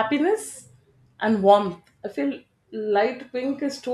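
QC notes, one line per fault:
No fault found.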